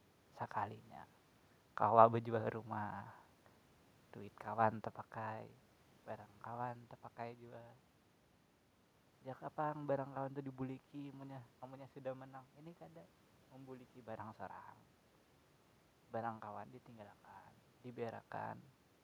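Listening to this speech recording, nothing stood out as a technical problem.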